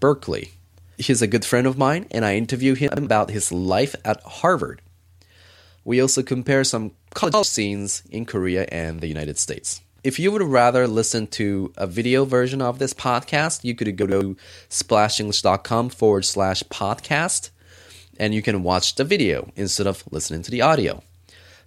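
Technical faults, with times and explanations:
2.88–3.07 s, 7.25–7.43 s and 14.03–14.21 s, chunks out of order: after "mine and I interview", "also compare some" and "this podcast you could", two adjacent chunks of about 93 ms each play swapped, with the first one arriving one chunk late. Nothing is missing, but the sound briefly jumbles, and there are three hard joins. On the waveform these joins show as sudden jumps, and on the spectrogram as vertical broadband lines where the formant tracks break and resume out of sequence.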